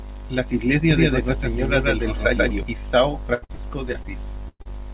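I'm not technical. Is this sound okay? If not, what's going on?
No. There are four separate problems, all in this speech.

From 0.91 to 2.63 s there is a doubled audio track: a second copy of the sound, about as loud as the first, trails roughly a sixth of a second behind. It is likely caused by the audio being picked up twice. Unlike an echo from a room, the copy is clean and doesn't fade away, and it starts and stops abruptly.

From 3.34 to 4.06 s there is repeated packet loss, which gives a choppy, robotic sound. Pieces of the call kept going missing, five times in well under a second, the longest about 77 ms. Each hole was patched by stretching the previous sound, so roughly a quarter of that stretch is filler.

At 4.48 to 4.62 s there is a burst of packet loss. About 120 ms vanished in one go. The filler sound fades out and ends in a brief silence before the speech carries on, so this is one long gap, unlike the rapid string of gaps before it.

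Straight after, from 4.62 to 4.67 s, comes a short concealed packet loss. About 40 ms went missing and was smoothed over. It is heard as a quick smear or wobble rather than a noticeable gap.

The muffled, phone-like tone, with nothing above 4 kHz, comes from the normal phone codec and isn't one of these faults.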